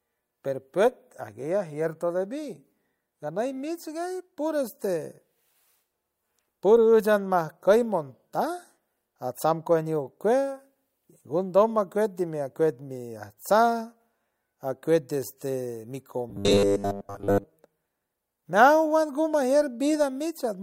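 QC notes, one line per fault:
16.3–17.48 s, robotic sound from repeated short buffers: the speech turns into a rigid metallic buzz fixed at 100 Hz, loosely following the words. Likely cause is audio arriving too slowly, so a roughly 10 ms chunk is replayed while most of the real audio is dropped.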